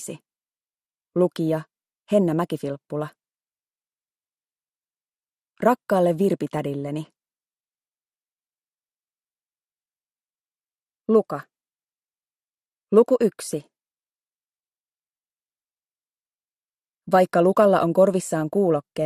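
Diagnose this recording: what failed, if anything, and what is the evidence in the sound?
The sound is dull and gurgling from start to finish, with a granular roughness and upper frequencies flickering in and out. This is likely MP2 compression at the codec stage, fitting a low rate around 80 kbps: starved sub-bands drop out and the remaining bands are coarsely quantised.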